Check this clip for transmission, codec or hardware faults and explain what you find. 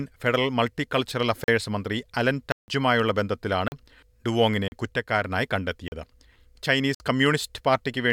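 There are dropouts: six blocks of digital silence cut into the speech, at 1.44, 2.52, 3.68, 4.68, 5.88 and 6.95 s. Most last 40 ms, the one at 6.95 s runs 55 ms, and 2.52 s is a full 160 ms hole. The output buffer likely wasn't filled in time, so zeros went out instead. The speech cuts out and back with no fade.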